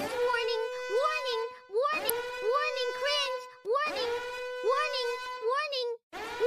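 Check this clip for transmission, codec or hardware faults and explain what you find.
There is one fault: damaged data in a compressed stream at about 2.10 s. A stretch of the encoded bitstream there is corrupt, so the decoder misreads it, loses frame sync and resumes at the next valid header. The result is a brief blip lasting only a few milliseconds. On a waveform it appears as a sudden spike or discontinuity; on a spectrogram it shows as a thin, bright vertical stripe spanning a wide frequency range.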